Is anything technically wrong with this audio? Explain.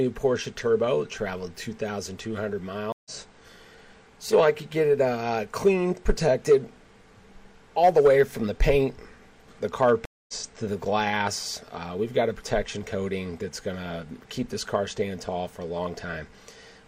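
Yes. There are two stream reconnects, at 2.92 to 3.11 s and 10.05 to 10.34 s. The connection drops, the player goes silent for about 133 ms and 231 ms respectively, then a fresh decoder picks up mid-stream with a brief fade-in. Unlike a plain dropout, the audio resumes roughly 150 ms and 0.3 s further on, so material is skipped, not just muted.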